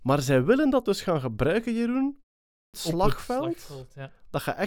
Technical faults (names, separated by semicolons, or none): clipped start after a pause